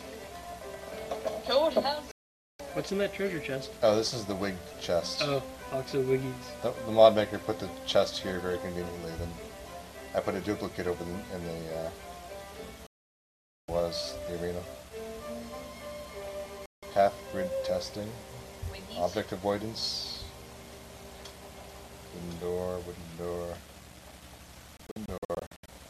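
Digital broadcast dropouts at 2.11–2.60, 12.87–13.69 and 16.66–16.83 s mute the audio outright, and at 24.77–25.69 s it breaks into short holes of up to 72 ms. Each time, the receiver lost valid frames and silenced output until clean ones returned, so that programme is gone.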